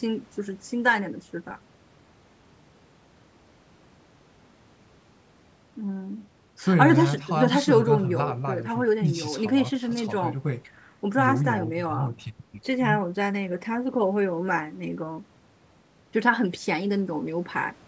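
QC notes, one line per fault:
Nothing to flag here, just speech that has come through a call's microphone processing, so the deepest bass is trimmed away and nothing sits above 8 kHz, which is exactly what that path is meant to do.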